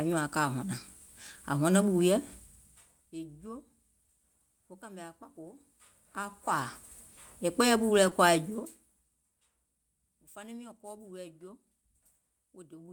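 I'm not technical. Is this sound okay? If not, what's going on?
No. There's short concealed packet loss at 8.09 to 8.13 seconds: about 20 milliseconds of speech arrived too late, so the receiver patched the gap with a brief smear.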